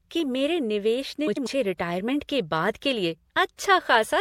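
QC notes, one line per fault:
1.27–1.47 s, frames out of order: two neighbouring chunks of about 96 ms each got swapped, which fits runs of four frames apiece decoded in the wrong sequence. So that fifth of a second of speech plays back-half-first, giving a quick garbled flutter. Nothing's actually missing, so timing after it stays put.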